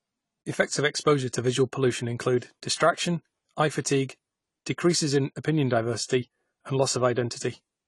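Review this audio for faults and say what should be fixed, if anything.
The speech sounds dull and smeared from start to finish, with a watery, fizzy texture on sibilants and sustained vowels, and nothing reaches above 11.5 kHz, so the top of the spectrum is simply missing. This is likely AAC compression, with AAC-LC quantising each frame's frequency lines coarsely and cutting the high band to save bits. The damage is plainly audible, which fits a low bitrate of around 32 kbps. To prevent it, encode at a higher bitrate or keep an uncompressed master.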